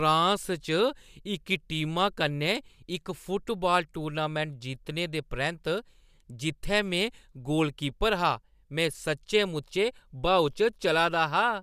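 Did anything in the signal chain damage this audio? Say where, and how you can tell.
No, no stage of the signal chain has left an audible mark on this speech recording.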